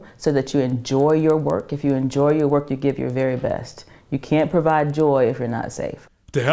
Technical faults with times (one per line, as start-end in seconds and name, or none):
0.00-6.53 resampler restarted on every block